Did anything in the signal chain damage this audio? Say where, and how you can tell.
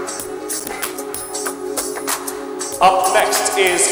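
Yes. Between 0.60 and 0.86 s there is processor overload crackle at the driver or buffer stage. The processor fell behind on its buffer deadlines, and each missed buffer was replaced by silence, so the sound is chopped by a rapid run of hard-edged dropouts, heard as gritty tearing. A waveform would show around fifteen short flat gaps, each about 5 ms, which fits a small buffer. A spectrogram would show thin full-height vertical streaks across that stretch.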